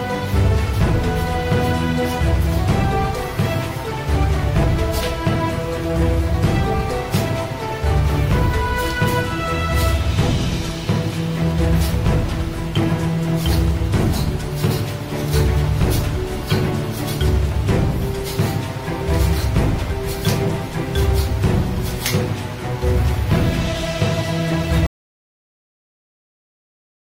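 At 24.86 s the sound cuts out mid-flow and never comes back, leaving about 2.3 s of dead silence with no room tone right to the end. That's an audio dropout to silence, likely the input disconnecting while the recorder kept writing silence.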